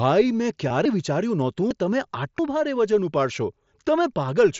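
Concealed Bluetooth headset packet loss occurs at 0.69 s in this speech recording, which comes through a wideband mSBC headset link that caps the band at 8 kHz with light graininess. About 15 ms of audio went missing between headset and phone, consistent with two lost packets. The receiver filled the gap by repeating the best-matching recent stretch of waveform, with at most a brief buzzy smear and slight warble as real audio resumes.

Dropped buffer (overrun) faults are heard as a sudden jump forward in the speech at 0.85, 1.71, 2.39 and 3.67 s. Three lose roughly a tenth of a second, and the one at 1.71 s loses closer to 150 ms. There is no silence, because the surrounding audio is spliced directly together. The likely cause is the recording software failing to collect its samples before the hardware overwrote them, so whole chunks vanish and can clip part of a word.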